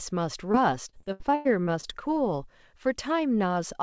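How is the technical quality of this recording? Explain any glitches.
The recording has one clear glitch: a burst of repeated packet loss that makes the speech choppy and robotic. The audio stops at 8 kHz throughout, which fits a wideband call codec such as G.722.

From 0.52 to 1.91 s, a run of short holes (the longest about 0.1 s) were each patched by continuing the previous sound, so about a fifth of that span is concealment. On a waveform, this shows as repeated, near-periodic segments. On a spectrogram, it shows as buzzy, smeared harmonics with abrupt seams.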